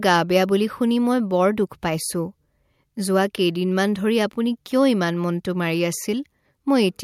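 Nothing technical goes wrong anywhere in this bit of speech, so there's no fault to point to at any moment.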